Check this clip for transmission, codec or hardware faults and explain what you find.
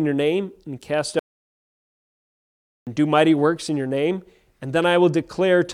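One fault: an audio dropout to silence from 1.19 to 2.87 s. The input was likely lost while the recorder kept writing silence, so after "your name and cast" about 1.68 s of speech vanishes into dead silence until "do mighty works in".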